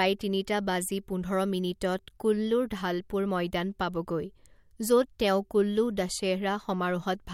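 Listening to the speech here, nothing stood out as a technical fault at any point.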